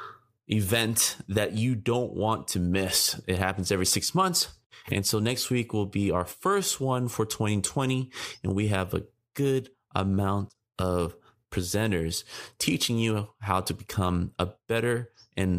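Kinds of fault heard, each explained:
No audible faults present.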